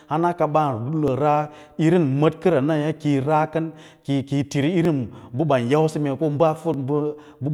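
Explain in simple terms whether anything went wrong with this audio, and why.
A short click interrupts the speech about every 1.89 seconds, from 1.08 s to 6.74 s. That is about four clicks. These are clock drift buffer slips. Two devices likely ran on slightly mismatched clocks, so a tiny chunk of sound was periodically dropped or repeated.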